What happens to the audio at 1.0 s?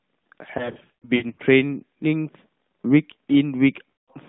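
Lost AMR speech frames affect the audio from 0.58 to 1.40 s, so 1.0 s falls inside the damage. Radio errors corrupted frames, and the narrowband AMR decoder filled each gap by reusing the last good pitch and vocal tract settings at falling gain. About 380 ms of speech is lost in short gaps scattered across those 800 ms, the longest lasting 60 ms. The result is a string of brief dips, warbles and smeared sounds.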